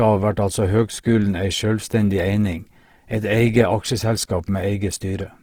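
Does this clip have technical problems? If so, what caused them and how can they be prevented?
Yes. Throughout the speech, the sound is rough and grainy, with tones dissolving into hiss. This is likely Opus compression in its CELT music mode at a rate around 16 kbps, where starved bands are filled with folded copies or noise. On a spectrogram, energy still reaches about 20.4 kHz, but the harmonics look hazy and noise-textured instead of crisp. Encoding at a higher bitrate, or letting Opus use its speech-oriented mode, would prevent it.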